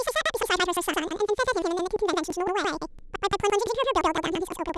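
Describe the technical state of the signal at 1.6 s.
At 1.6 s the stereo data is stored planar, with each block holding all left samples followed by all right ones, but it is being read as interleaved pairs. This runs through the whole clip. Each block of about 171 ms, which fits a 4096-sample block, plays twice at double speed, left then right, so the speech keeps its pace but sits an octave high, with a flutter repeating about 5.86 times per second.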